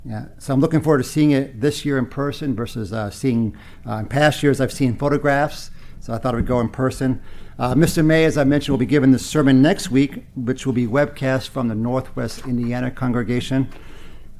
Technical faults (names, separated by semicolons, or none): none